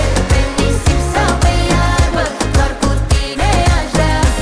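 No faults to report; nothing audible on this clip needs fixing.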